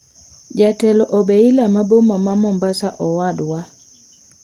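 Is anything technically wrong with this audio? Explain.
No, nothing is technically wrong with this speech.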